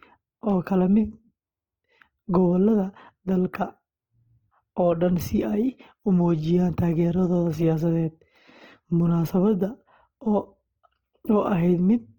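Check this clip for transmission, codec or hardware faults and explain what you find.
One fault is present, lasting the whole clip: Opus compression is the likely cause of the plainly audible codec damage. Working in its music-oriented CELT mode at a rate that fits about 16 kbps, the encoder keeps each band's energy but fills starved bands by folding or noise. The speech therefore sounds rough and grainy rather than swirly. A spectrogram shows a smeared, noise-textured fill with few empty holes, extending to about 20.2 kHz before cutting off.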